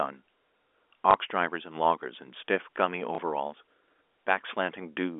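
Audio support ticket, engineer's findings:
Packet loss with last packet repeated at 1.11–1.14 s and 3.15–3.18 s. Small blip each. Receiver jitter buffer or concealment replayed the prior 30 ms, which fits one lost 30 ms packet, over a band-limited G.711 telephone line.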